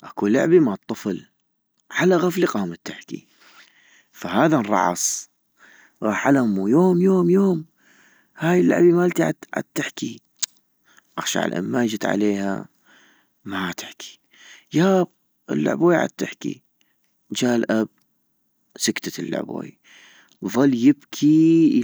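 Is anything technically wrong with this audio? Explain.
Yes, there's a block size mismatch (truncated) running through the whole speech clip. One stage writes longer blocks than the next reads, so each block's tail gets chopped off. That leaves a steady buzz at 46.9 Hz, which fits 1024-sample blocks. The pacing stays at normal speed.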